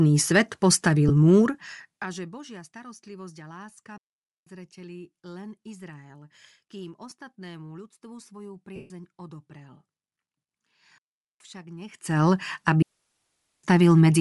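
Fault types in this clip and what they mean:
Bluetooth LC3 compression: The speech has a plainly audible breathy, grainy edge throughout. The likely cause is LC3 transform coding, which fits 7.5 ms frames at around 48 kbps, zeroing high bands and filling them with noise.
lost LE Audio frames: Brief noisy smears appear at 1.09 s and 7.1 s, each about 15 ms, and a longer one runs from 8.76 to 8.91 s and fades away. The decoder repeated the last spectrum with random signs and faded it as the gap lengthened.
digital wireless dropout: Clean holes of near silence, with no noise burst either side, appear at 3.98–4.47 s, 10.98–11.40 s and 12.82–13.64 s, lasting about 0.49, 0.42 and 0.81 s. The wireless link lost too much data and the receiver muted with a very short fade.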